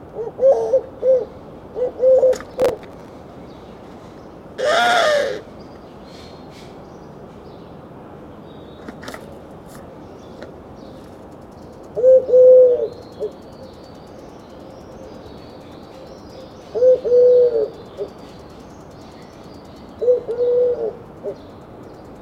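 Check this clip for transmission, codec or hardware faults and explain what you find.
One fault: processor overload crackle from 2.50 to 3.09 s. The processor missed around twenty buffer deadlines over that stretch, each repeating old audio, with buffers of about 5 ms. The result is a gritty burst of crackle.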